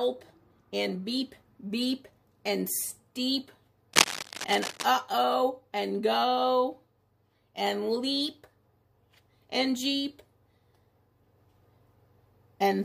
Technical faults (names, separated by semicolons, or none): cable scratch noise